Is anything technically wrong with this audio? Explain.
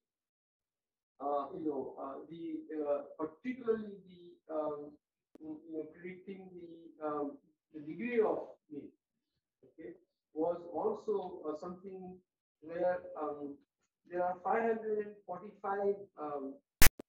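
Yes. From 16.82 to 16.89 s, file tags played as audio: text metadata decoded as samples gives a harsh, one-sided rasp, then silent zero padding. Its hard-edged, offset buzz distinguishes it from a single click.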